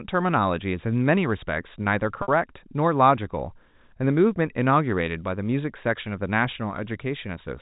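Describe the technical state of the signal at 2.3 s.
Packet loss with pitch repetition, 2.22 to 2.28 s: about 60 ms of audio went missing, bridged by repeating the last pitch period, giving a brief held, buzzy tone that fades before the speech cross-fades back in.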